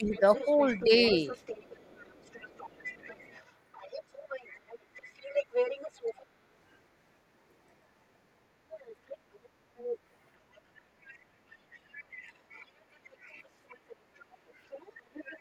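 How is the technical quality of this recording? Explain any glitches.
The recording has echo-control trouble in several stretches. Two faults keep turning up, and they overlap in places.

Speech suppressed in double talk, from 0.00 to 1.12 s, 11.08 to 13.17 s and 14.19 to 15.39 s: the talker dips in short bursts, by up to about 20 dB, likely because the echo canceller ducked everything during crosstalk.

Other side's voice leaking through, from 0.13 to 6.14 s, 8.72 to 9.98 s and 13.70 to 15.38 s: a faint second voice, roughly 15 to 20 dB down, sits underneath, likely loudspeaker echo the canceller didn't fully remove.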